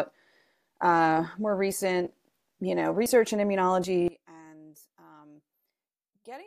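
A speech recording with skips forward at 1.72 s, just after "uh more", at 3.06 s, after "you know", and at 3.84 s, each losing about a fiftieth of a second, likely dropped buffers (overrun) where unread samples were overwritten. From 4.08 s to the end, the mono sum drops by about 22 dB, leaving a faint remnant, likely from one channel inverted so the shared centre cancels.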